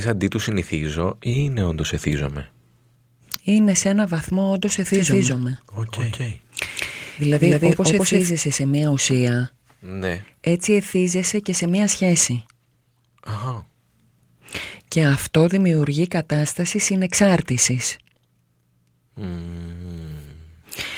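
After "σε ένα βαθμό όντως", from 4.94 s to 8.30 s, a doubled audio track appears. A second, equally loud copy trails by about a fifth of a second. It is dry and abrupt at both ends, likely from a slower capture path. It stops before "σε μία ουσία ναι".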